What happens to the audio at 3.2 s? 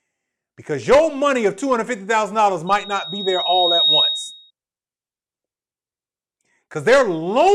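At 3.2 s a loudspeaker feedback squeal is building. It runs from 2.67 to 4.51 s. The microphone is picking up its own loudspeaker, and the loop gain exceeds one near 3.8 kHz. That tone swells over about a second, ending roughly 5 dB above the speech.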